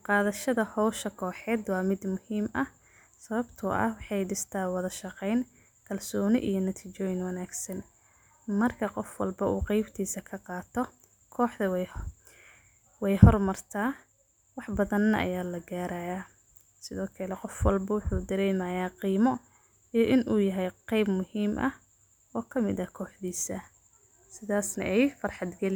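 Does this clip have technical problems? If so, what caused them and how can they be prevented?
No, this clip has no technical problems, so there is nothing to trace back to a cause or to prevent.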